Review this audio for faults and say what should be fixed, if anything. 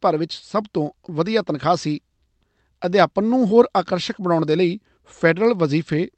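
Clock drift between sender and receiver runs throughout the clip. The sending device's clock runs a few percent fast, so audio arrives slightly quicker than it is played out. The jitter buffer keeps overfilling.

Repeated timing corrections occur from 0.19 s to 5.98 s. Playback runs at about 104 percent of normal speed as the receiver keeps trimming short slices of speech to drain the surplus. The cuts are small, unevenly spaced and all in the same direction.

To prevent both, the receiver should estimate the sender's clock rate and resample smoothly to match it rather than dropping chunks. The Opus call path carries the speech with audio up to 8 kHz.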